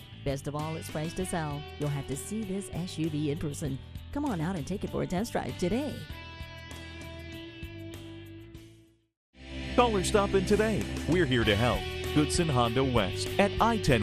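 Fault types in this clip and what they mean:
MP2 compression: The whole clip has the dull, gurgling character of MPEG Layer II coding at a low rate, which fits about 80 kbps. The encoder splits the sound into sub-bands and runs short of bits. Upper bands drop out and flicker in and out. The bands that remain are coarsely quantised, so a granular roughness sits on everything. The damage is plainly audible. A low-rate MP2 stream is the likely cause.
DAB burbling: From 2.66 to 2.91 s the sound breaks into a short burst of burbling. This comes from bit errors slipping past the error correction into the MP2 data. Corrupted samples put short blips of noise in single sub-bands, and corrupted scale factors make sub-bands jump in level for up to a frame. The burst spans a quarter of a second, which points to about twelve damaged frames. The error rate is low, a fraction of a percent.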